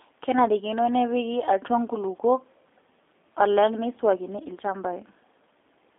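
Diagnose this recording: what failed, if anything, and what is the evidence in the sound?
The codec stage failed: a G.729 codec is audible throughout. Nothing passes above about 3.7 kHz and the band sits near 300 Hz to 3.6 kHz. Unlike a plain low-pass or telephone filter, the speech has a rough, synthetic texture from frame-by-frame model resynthesis, which fits an 8 kbit/s rate.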